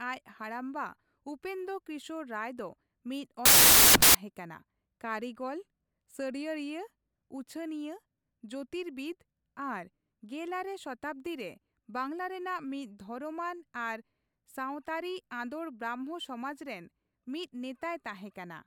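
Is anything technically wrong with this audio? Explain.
Yes. From 3.45 to 4.15 seconds, the speech turns into loud, harsh broadband noise. These are samples built from the wrong bytes. The reader assembles each sample with misaligned or swapped bytes. The rapidly changing low bits become the dominant part of every value. That is why the noise is so harsh.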